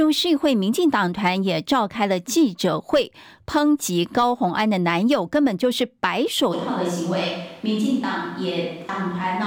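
At 6.54 s the speech suddenly goes roomy and hollow, with the low end thinning out, and it stays that way right to the end. The level drops by around 5 dB and there's more room noise, roughly 30 dB below the speech. That abrupt change points to a switch to a distant microphone. Most likely the close mic's feed dropped out or wasn't used and a mic further away, like a camera's, picked up the rest.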